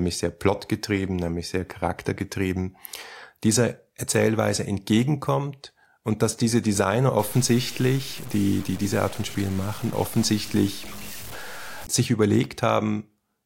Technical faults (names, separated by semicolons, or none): low bit depth without dither